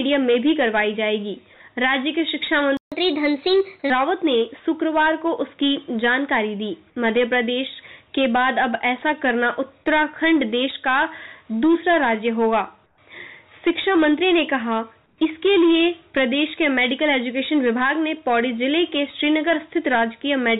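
At 2.77 s the player most likely ran short of data or had its thread blocked, and a playback stall follows: the output drops to silence for about 147 ms, until 2.92 s, cutting the sound off mid-flow before it resumes.

From 2.92 s to 3.90 s the player works off the backlog from that gap with catch-up at higher speed, resampling to 1.15 times normal rate. Speed and pitch rise together, by about two semitones.

At 12.86 s and again at 15.06 s, comfort noise replaces the background for 120 ms each time. The sending side likely stopped transmitting when it detected no speech, and the receiver filled the gap with synthetic noise roughly matched to the real background, which sits about 43 dB and 42 dB below the loud passages. The textured background gives way to a flat, steady hiss, about 5 dB quieter at 12.86 s and about 2 dB quieter at 15.06 s. Throughout, the audio has nothing above 4 kHz, which fits the G.711 A-law call path.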